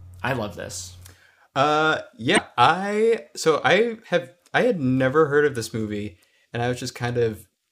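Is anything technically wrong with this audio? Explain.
Yes, there's one fault: damaged data in the compressed stream, from about 2.34 to 2.38 s, right before "I so I". For those roughly 40 ms, the encoded bytes feeding the decoder were corrupted, so it couldn't read the frames properly, lost sync and had to hunt for the next valid frame header. What you get is a short, harsh blip or squawk chopped into the speech instead of clean audio.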